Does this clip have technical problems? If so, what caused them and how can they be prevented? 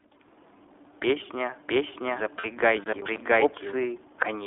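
Yes. The iLBC codec narrows the whole clip to roughly 300 Hz–3.5 kHz, which fits a narrowband codec, here running at 15.2 kbps. It sounds slightly rough and synthetic, and the spectrogram is empty above 3.5 kHz. A wideband codec such as Opus would keep the full range.

From 2.40 to 2.46 s, lost iLBC frames leave a 40 ms hole, which fits two lost 20 ms frames. Concealment repeats the last pitch cycle, so it sounds like a brief buzzy held vowel and shows as flat, smeared harmonics on a spectrogram. A jitter buffer with forward error correction or redundancy would cover such losses.

Between 2.84 and 3.21 s, processor overload crackle gives a gritty tearing. This points to about ten missed 10 ms buffers, each replaced by silence. On the waveform these appear as sharp-edged dropouts to silence, and on a spectrogram as vertical broadband clicks. Larger buffers or a lighter processing load would stop the deadlines being missed.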